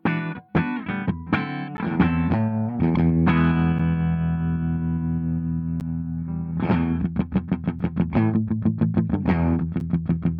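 Short holes of silence cut the audio at 1.77, 3.79, 5.80, 7.79 and 9.80 s. These are gaps between stream segments, arriving every 2 s. Each lasts 4 to 11 ms, with hard edges. Segment timestamps leave small gaps that the player fills with silence.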